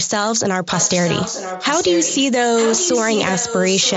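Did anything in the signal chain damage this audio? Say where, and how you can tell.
Yes. An echo leak, likely from call processing. A copy of the speech returns 0.93 s late. It is about 10 dB down from 0.67 to 2.23 s, and about 5 dB down from 2.57 s on.

Concealed Bluetooth headset packet loss on the headset link at 2.69 s. One 7.5 ms frame dropped. The receiver filled it with recent waveform, so it is nearly hidden.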